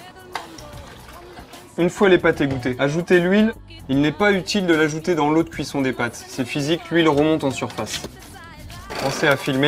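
No faults turn up anywhere here: nothing jumps out, drops away or breaks up at any point, so there's nothing to flag.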